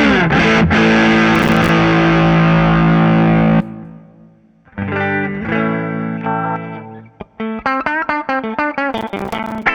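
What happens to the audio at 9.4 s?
Right around there you're in a burst of processor overload crackle, running from about 8.93 to 9.63 s. The machine keeps missing its deadlines on tiny buffers of around 5 ms, dozens of times over that stretch, and each miss drops a hard-edged sliver of silence, so the sound turns gritty and torn until the load eases.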